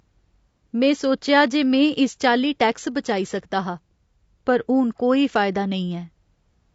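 From start to finish the speech has a rough, grainy texture, with a hiss-like fill sitting between the harmonics and a top band that sounds thinned and a bit synthetic. That points to low-delay AAC compression, likely AAC-ELD at a rate that fits about 32 kbps. Its short frames can't separate pitch harmonics cleanly and eat bits, so the damage is plainly audible. The room noise underneath sits about 53 dB below the speech.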